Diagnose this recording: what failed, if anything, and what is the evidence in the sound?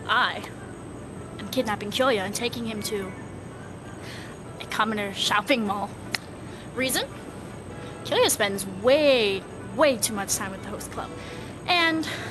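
Nothing in the recording points to a failure at any stage; the audio arrives intact through the call path, with the expected codec character and a top end that stops around 12 kHz, consistent with an Opus link.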